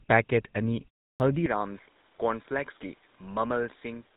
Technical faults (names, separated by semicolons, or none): GSM full-rate codec; clipped start after a pause